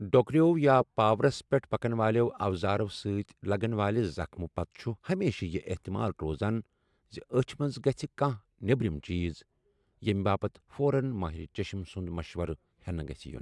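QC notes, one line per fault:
No faults found in this clip.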